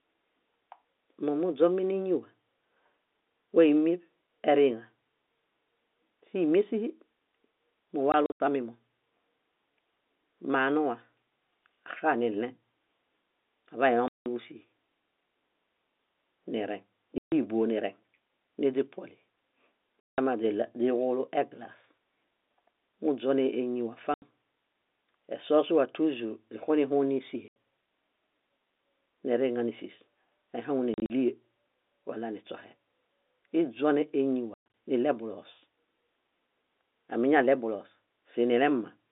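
Packet loss filled with silence hits at 8.1, 14.1, 17.2, 20.0, 24.1, 27.5, 30.9 and 34.5 s. Dropped chunks, which fit 20 ms packets, become hard-edged holes, up to 180 ms, over the band-limited phone sound.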